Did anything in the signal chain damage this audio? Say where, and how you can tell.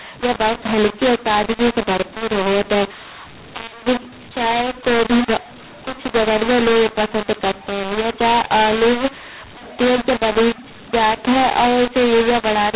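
Yes: a mu-law and A-law mix-up runs throughout the speech, from start to finish, at the codec decode stage. The telephone path itself is sound, a G.711 mu-law stream at 8,000 samples a second, but it was expanded with the A-law table instead. Each 8-bit code therefore maps to the wrong amplitude. Levels come out scrambled and the speech sounds harsh and gritty, while the quietest codes are lifted well above silence, so the pauses fill with noise.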